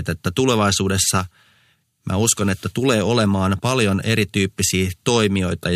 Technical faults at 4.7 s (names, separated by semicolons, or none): none